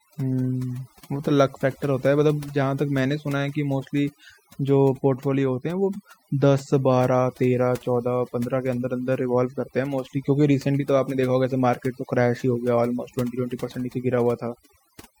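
A speech recording marred throughout by overdone noise removal: a noise reducer set far too aggressively has been pulling individual frequency bands down to nothing whenever they sit close to its noise estimate, taking the softer parts of the voice with them. Pauses collapse into near silence dotted with twinkling specks. Unlike a noise gate, which mutes everything at once, this leaves isolated tonal fragments flickering in the gaps.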